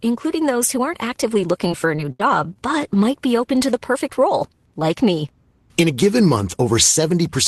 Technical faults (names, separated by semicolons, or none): repeated packet loss (robotic sound)